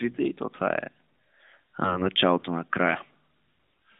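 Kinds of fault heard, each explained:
AMR bit errors: corrupted codec bits turn speech hoarse and gargly around 1.84–2.06 s and 3.56–3.74 s; the spectrogram shows smeared, grainy harmonics while the waveform envelope holds level.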